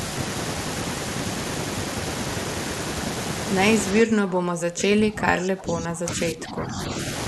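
Speech suppressed in double talk runs from 4.0 to 6.93 s in this speech recording: the talker's level sinks by as much as about 25 dB for roughly three seconds, most likely because an echo canceller could not separate the local talker from simultaneous far-end echo and attenuated both.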